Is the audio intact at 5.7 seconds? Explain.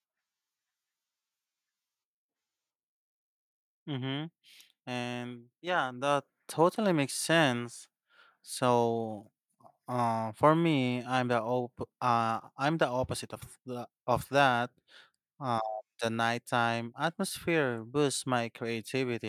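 No. At 5.67 s the microphone volume is stepped up. The change is instant, with no fade. The call software judged the input too quiet and raised the device's input level in a single jump of about 4 dB. The whole signal gets louder at once. The speech and the room sound behind it rise together. The level then holds at the new, higher setting.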